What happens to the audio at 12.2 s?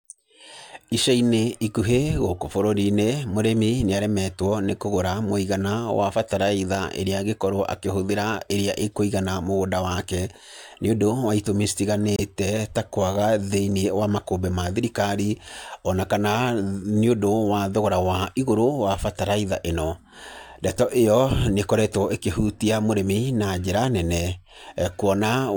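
A brief, harsh blip of misplaced noise cuts in from 12.16 to 12.21 s, just after "nĩ ũndũ wa itũmi", and it peaks fairly loudly, near -10 dBFS. This is a corrupt frame decoded: flipped bits in what sounds like a single compressed frame left the decoder reading wrong gain values or spectral codes. It played the frame anyway, so for roughly 40 ms energy lands at frequencies where it doesn't belong.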